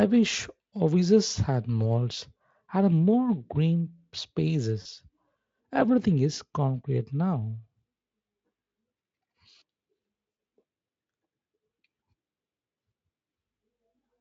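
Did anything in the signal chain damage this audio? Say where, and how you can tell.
Yes. The damage enters at the network stage as VoIP packet loss concealed by the speech codec, at 4.81 to 4.86 s and again at 10.31 to 10.37 s. The first gap lasts about 40 ms and the second about 60 ms, which fits two and then three lost 20 ms frames. A buffer underrun would leave silence or a click. Here the decoder instead extends the last pitch and filter into a buzzy tone or coloured noise that fades, while the surrounding Speex coding shows at most faint damage.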